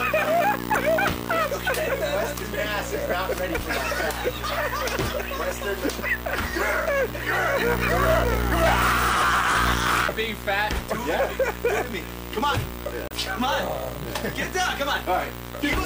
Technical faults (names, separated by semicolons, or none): damaged data in a compressed stream